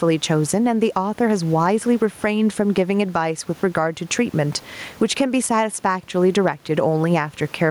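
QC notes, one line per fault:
Throughout, gain pumping: the gain swings by roughly 15 dB. Loud and quiet passages sit squashed close together. The likely cause is input gain set far too high with a fast limiter clamping down on every peak. The room noise itself sits about 36 dB below the speech.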